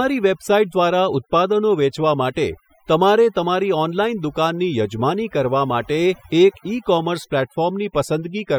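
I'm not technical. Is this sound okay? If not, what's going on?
No, not quite. The speech has overdone noise removal running through the whole clip. Someone used a clean-up tool to get rid of background noise, but set it far too strong. It shuts off any slice of the sound that seems close to the noise level, and the softer parts of the voice get cut along with the noise. So the background drops away and breaks up into little twinkly specks.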